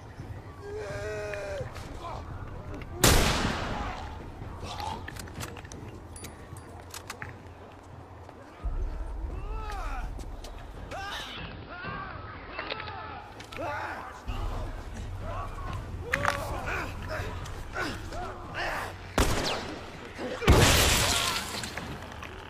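Digital radio blending to analogue occurs from 11.16 to 13.39 s: the receiver loses the digital stream and cross-fades over 213 ms to the AM broadcast, so treble is cut, hiss appears roughly 25 dB down, and level dips about 1 dB.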